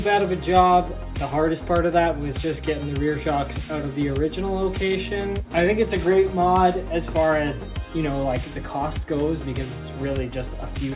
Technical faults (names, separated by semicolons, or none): none